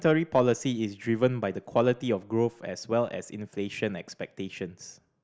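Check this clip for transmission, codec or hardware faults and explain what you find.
Nothing in the speech points to a transmission, codec or hardware fault; the signal stays continuous and stable throughout.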